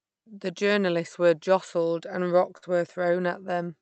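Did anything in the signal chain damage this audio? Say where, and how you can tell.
Yes, a burst of packet loss at 2.57–2.69 s, after "journalists were jostled and". The receiver stretched and faded the last sound rather than leaving silence, then skipped ahead.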